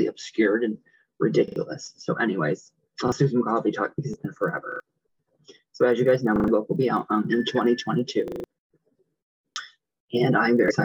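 A repeated buffer shows up six times: at 1.48, 3.08, 4.72, 6.36, 8.28 and 9.52 s. Each time fresh audio didn't arrive in time, so the device looped the same 40 ms slice with a hard join at every repeat. That's a quick stutter, once around 3.08 and 9.52 s and up to four extra plays at 8.28 s. The longest knocks out roughly 150 ms of what should follow.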